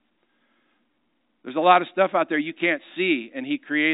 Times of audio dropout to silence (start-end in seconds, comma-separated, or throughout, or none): none